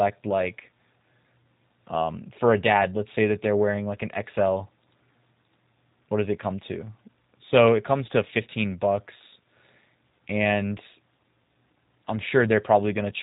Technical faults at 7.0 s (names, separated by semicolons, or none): G.729 codec